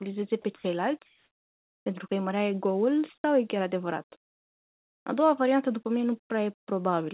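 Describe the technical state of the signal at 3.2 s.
At 3.2 s the speech briefly gives way to a flat bed of steady noise. This runs from 3.18 to 3.24 s, about 60 ms, and about 30 ms of real sound is lost within it. Speech returns with "e chiar adevărat". This is likely sound dropped by the voice detector. The sender judged the sound there to be background and stopped transmitting, and the receiver filled the gap with comfort noise. Around it, the narrowband call audio stops at 4 kHz.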